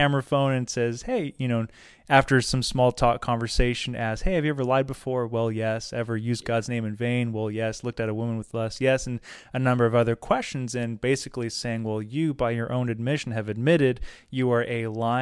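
No technical faults can be heard.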